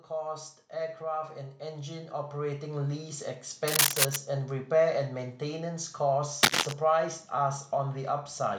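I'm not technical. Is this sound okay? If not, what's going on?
No. From about 0.19 to 3.32 seconds, the automatic gain control judged the incoming sound too quiet and kept turning its own volume up. You hear the speech and the background noise behind it swell louder together over those three seconds.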